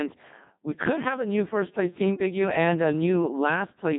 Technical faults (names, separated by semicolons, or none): Codec 2 vocoder